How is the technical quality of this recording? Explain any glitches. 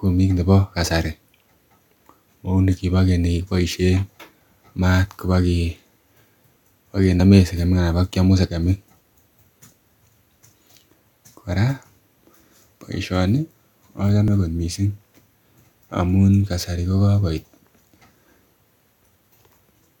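The recording has two glitches. At 7.2 s and 14.28 s the speech jumps ahead, losing roughly 20 and 40 ms: likely a dropped buffer (overrun), where unread samples were overwritten.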